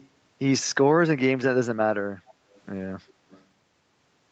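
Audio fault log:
0.00–0.08 s, 2.29–2.33 s, 2.55–2.61 s, 3.08–3.13 s and 3.30–3.43 s: echo leak. Short, faint scraps of the voice return about 266 ms after the original, roughly 30 dB below it and fainter still near 3.1 s. The likely cause is a far-end loudspeaker whose echo canceller let part of its microphone pickup through. The fixed 266 ms lag and the broken fragments set it apart from room reverberation, which trails off smoothly straight after each sound.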